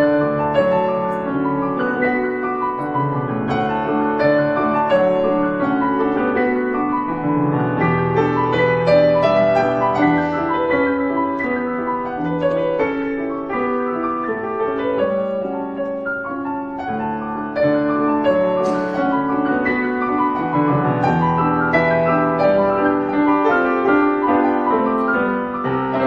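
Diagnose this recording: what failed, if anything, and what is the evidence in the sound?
The converter has sample clock jitter throughout: timing wobbles around 0.4 microseconds, leaving hiss about 55 dB under the signal that tracks loud, bright passages and vanishes in silence.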